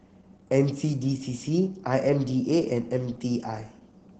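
From start to end, low-bitrate Opus voice compression in SILK mode, consistent with 12 kbps, caps the band at 8 kHz, leaving the speech muffled, hoarse and slightly robotic.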